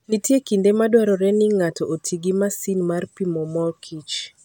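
No technical faults can be heard anywhere in the recording. There is nothing at any point in the speech that calls for comment.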